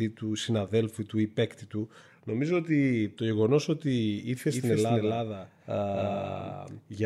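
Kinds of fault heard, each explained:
Doubled audio track: from 4.48 s to the end, a second, equally loud copy of the speech trails about 300 ms behind, dry and abruptly started, likely from a lagging capture path.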